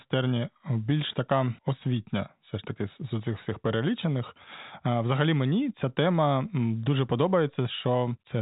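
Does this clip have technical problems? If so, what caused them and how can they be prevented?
No, the speech carries no technical faults; it has the narrow telephone character of G.711 coding, with nothing above about 3.8 kHz.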